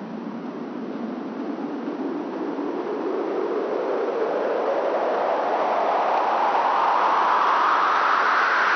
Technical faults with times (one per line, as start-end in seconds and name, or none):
none